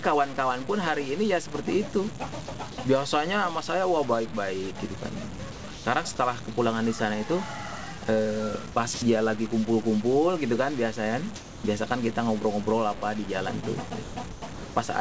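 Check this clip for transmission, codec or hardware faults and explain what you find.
Yes, there's trouble here: a grainy quantisation fault runs through the whole clip, and the voice detector chops or drops the sound at several points. The call path itself is audible in a clause worth knowing: nothing sits above 8 kHz, which fits a G.722 wideband link at 64 kbps.

Low bit depth without dither, throughout. The grit tracks the sound, rough and buzzy on quiet parts and swelling and shrinking with level, with the error floor only around 15 dB under the signal. The most likely cause is samples truncated to very few bits, roughly 5 by the sound of it, with no dither. Because of that, the error is locked to the waveform instead of being spread out as a smooth hiss.

Sound chopped by the voice detector, at 2.46 to 2.78 s, 5.52 to 5.86 s, 8.72 to 9.02 s and 14.04 to 14.76 s. In each stretch the sender's detector seems to have flipped between sending and muting more than once, likely judging quiet edges as background. 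Short pieces, adding up to anywhere from 80 to 440 ms, get swapped for synthetic comfort noise, so the sound stutters.

Sound dropped by the voice detector, at 6.16 to 6.18 s, 7.98 to 8.02 s and 11.36 to 11.64 s. Here the detector most likely decided the sound was background and simply stopped sending. The receiver filled the gap with steady comfort noise until the sound came back. The first two are brief 20 and 40 ms bites, while the last one loses about 210 ms.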